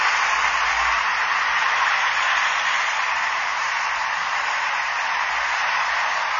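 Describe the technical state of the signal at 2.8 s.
At 2.8 s, as across the whole clip, the sound is dull and smeared with a warbly, fizzy texture and nothing above 6.9 kHz, likely from low-bitrate AAC compression, consistent with around 24 kbps.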